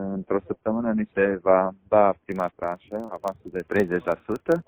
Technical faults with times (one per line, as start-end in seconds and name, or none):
2.32-4.68 filter restarted on every block